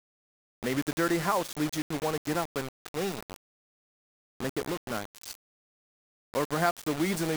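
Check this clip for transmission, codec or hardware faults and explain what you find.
There's one problem. Throughout the speech, quiet parts go gritty and grainy, with error only around 10 dB below the signal: likely low bit depth without dither, consistent with roughly 4-bit rounding.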